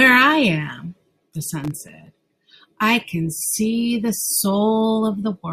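From 1.50 to 2.07 s a gritty burst of crackle tears through the speech. This is processor overload crackle: the processor repeatedly missed deadlines for its very short buffers, each well under a millisecond, leaving around twenty hard-edged gaps of silence.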